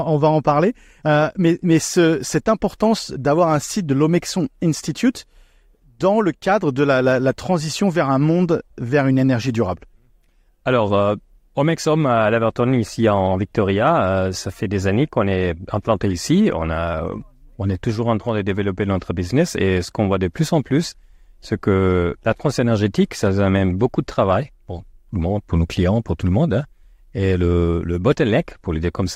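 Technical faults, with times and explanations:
No technical faults are present in this speech clip.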